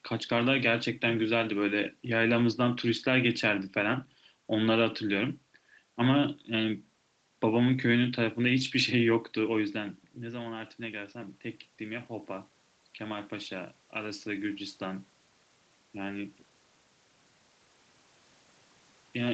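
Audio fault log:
9.74–15.09 s, automatic gain rising: after the speech drops by about 13 dB near 9.5 s as the talker moves away, voice and room noise swell together over about five seconds, because the automatic gain control reads the input as too quiet and slowly adds about 7 dB.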